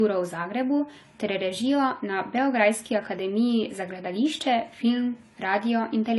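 From start to finish the speech stops dead at about 11.5 kHz and carries that smeary, watery low-bitrate texture. It's likely low-bitrate audio saved at a high bitrate, with the re-encode keeping the first codec's damage. It fits something like 32 kbit/s AAC later saved as a roomy MP3.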